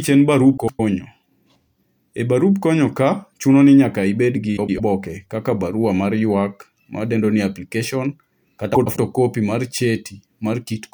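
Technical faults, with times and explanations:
0.57–0.80 s, 4.57–4.80 s and 8.75–8.97 s: frames out of order. In each stretch of about 0.23 s, two adjacent blocks of roughly 104.5 ms are played in swapped order, which fits two runs of four frames decoded in the wrong sequence. The speech there comes out as a garbled flutter. No time is lost; the material is only rearranged.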